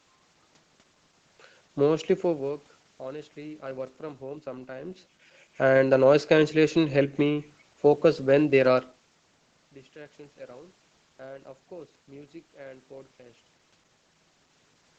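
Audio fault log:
No faults to log for this audio.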